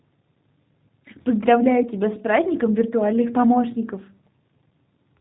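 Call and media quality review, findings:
G.729 codec damage, throughout. Speech plainly rough and synthetic, nothing above 3.8 kHz. Sparse pulse excitation through a narrowband vocal tract filter. Fits an 8 kbit/s G.729A path.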